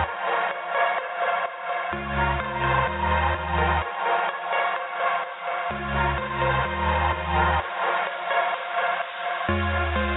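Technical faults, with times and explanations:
No technical faults can be heard anywhere in the audio. There is nothing here that needs a time or an explanation.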